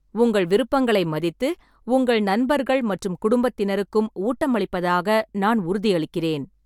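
Nothing goes wrong anywhere in this bit of speech, so there's no technical fault to point to at any moment.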